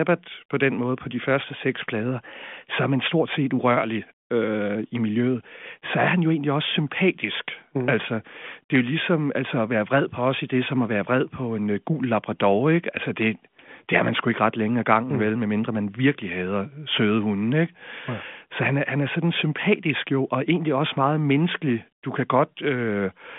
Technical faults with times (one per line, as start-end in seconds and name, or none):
none